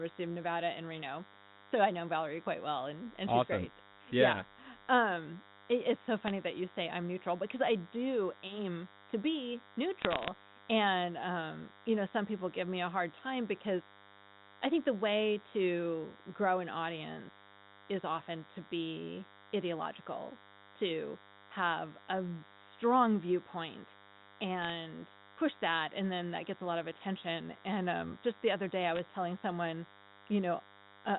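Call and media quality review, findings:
DECT cordless phone buzz: a steady, thin buzz runs through the whole clip, about 25 dB below the speech. The probable source is a nearby DECT handset or base whose 100 Hz radio bursts are rectified in the analogue front end. On a spectrogram, a 100 Hz harmonic comb stays present through the pauses.

Bit errors on a digital phone line: there are sharp tick clusters at 6.21–6.31, 10.02–10.28 (densest), 24.62–24.70 and 28.95–28.99 s. Flipped bits in the G.711 A-law stream each corrupt a single sample. On the waveform these show as isolated one-sample spikes, and on the spectrogram as thin broadband vertical lines.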